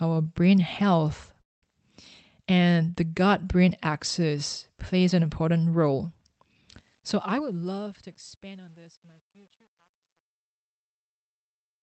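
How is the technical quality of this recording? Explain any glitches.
The recording has three distinct faults, all heard through a call path whose Opus coding stops the top end at about 8 kHz.

From 1.41 s to 1.63 s the sound stalls in a call audio freeze. The last sound trails into a brief fading buzz or hiss, then about 200 ms of silence, before the audio picks up exactly where it left off. The likely cause is packets held up in transit until the jitter buffer ran dry. The receiver bridged the wait with about 210 ms of filler, so a gap was inserted rather than material lost. Unlike a packet dropout, nothing is skipped. The timing simply shifts later.

From 7.29 s to 9.06 s there is a jitter buffer speed-up. The sound runs at about 112% speed, so it feels hurried, yet the pitch stays where it was. The receiver had built up extra delay, probably after delayed packets arrived together, and trimmed it back by cutting many tiny pitch-period slices, roughly 200 ms in all. 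Because pitch is unchanged, this is not a tape-style speed change or resampling error, where tempo and pitch rise together.

The fade-out starting around 6.7 s, from 6.75 s to the end, carries truncation distortion on a fade. The gain stage keeps only about 9 bits and adds no dither. As the level sinks toward the smallest step, the waveform collapses into a few coarse square steps. From 7.80 s onward the tail turns gritty. Codec noise would sit evenly under the signal. This grit instead grows worse as the level falls.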